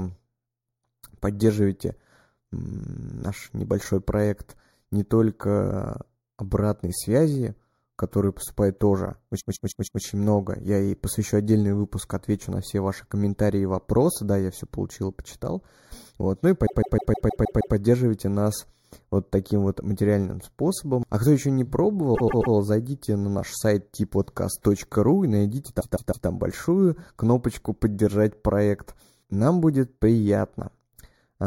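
The whole clip has a hollow, slightly phasey edge from channel delay (comb filtering). One channel runs a fraction of a millisecond behind the other, roughly 0.2 ms, and when the two are folded to mono the shared speech cancels at evenly spaced frequencies. The first notch sits somewhere around 3 kHz, so the speech loses presence and sounds thin and boxy right where consonants live, and it stays that way from start to finish.

Then there are four stutters from repeated frames, where a short stretch of the compressed stream gets played again and again before the speech moves on. At 9.39 to 10.02 s a 157 ms chunk loops four extra times, adding about 0.63 s. At 16.65 to 17.75 s the same length chunk loops seven extra times, about 1.1 s of stutter, right before "нас вот таким вот". At 22.14 to 22.53 s, after "кто еще не" and before "зайдите на наш сайт", a 131 ms chunk repeats three extra times. 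At 25.80 to 26.27 s, after "и найдите" and before "большую кнопочку", a 157 ms chunk repeats three extra times. Each repeat can click or blip at the seam where the frames don't line up.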